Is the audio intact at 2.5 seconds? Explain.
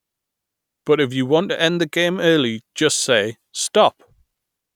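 Yes, at 2.5 seconds the speech plays through cleanly, with no dropout, click, distortion or other fault to be heard at that point.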